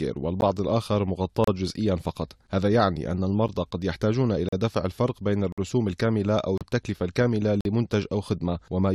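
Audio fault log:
0.41, 1.44–1.48, 3.48, 4.49–4.53, 5.52–5.58, 6.58–6.61 and 7.61–7.65 s: gap between stream segments. The speech is cut by hard-edged silent holes of 8.5 to 54 ms, about once a second. This fits one-second stream segments whose time stamps leave small gaps, which the player fills with silence, so no audio is lost.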